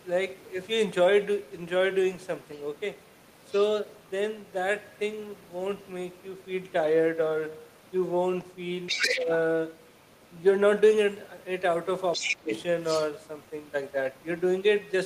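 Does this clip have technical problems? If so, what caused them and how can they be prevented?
Yes. Other side's voice leaking through at 2.55–2.78 s, 8.86–9.2 s, 9.84–10.33 s, 12.12–13.12 s and 13.43–13.49 s: a second voice comes through, faint in most spots but nearly as loud as the talker at 8.86 s and 12.12 s. The likely cause is loudspeaker playback reaching the microphone and not being fully cancelled by the echo canceller. Prevent it with a headset or a better-tuned echo canceller.

Speech suppressed in double talk at 8.92–9.29 s and 12.17–12.51 s: the talker's voice dips by roughly 10 dB and then 15 dB, just as the leaked voice overlaps it. Likely the echo canceller, unable to separate the two voices, turned both down together. Prevent it with echo cancellation that detects double talk and keeps the near talker at full level.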